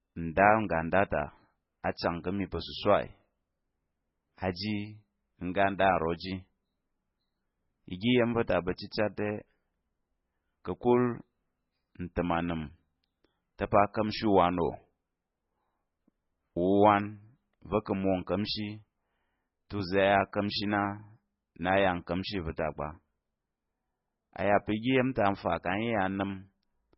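All the way through, the speech sounds watery and swirly, with nothing above 5.6 kHz, likely heavy MP3 compression at a very low bitrate, around 16 kbps.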